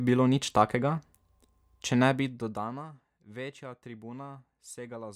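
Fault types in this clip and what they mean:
Nothing to flag here; I don't hear any technical faults anywhere in this speech.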